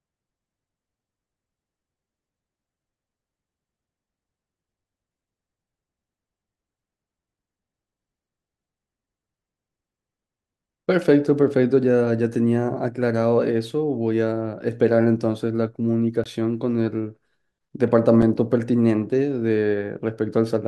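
At 16.24 s the speech drops into a block of digital silence for about 20 ms, and again at 18.22 s for about 5 ms, a length that fits a 256-sample buffer left unfilled. The waveform shows near-silent gaps.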